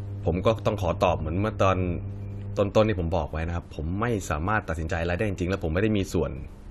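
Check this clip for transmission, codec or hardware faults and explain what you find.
Mains hum runs from 0.0 to 2.61 s, then stops. It is a steady low tone at 50 Hz with some low harmonics, sitting roughly 10 dB below the speech. A ground loop or a nearby transformer has coupled the power line into the signal path.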